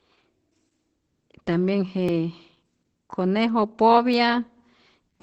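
Opus voice compression runs through the whole clip. The speech is coded by Opus's SILK linear-prediction layer in wideband mode, with nothing above about 8.3 kHz, which fits a low bitrate near 12 kbps. The coarsely coded excitation makes the voice plainly muffled, hoarse and slightly robotic.

Periodic USB or driver dropouts begin at 2.09 s and repeat every 1.02 s until 5.15 s, about four in all. Each time a stalled bus or driver skips a few milliseconds of audio outright, so the speech jumps forward with a small regular tick.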